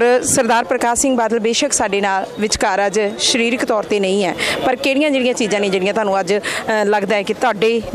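No technical faults are audible.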